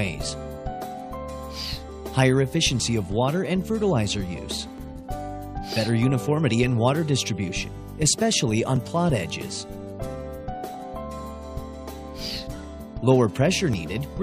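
At 2.80, 4.78, 8.76 and 13.73 s the audio skips forward by a few milliseconds. This is an overlap between stream segments: overlapping time stamps make the player discard sound that was never actually doubled, which fits 1 s segments. Unlike a dropout, no silence appears; the waveform simply jumps.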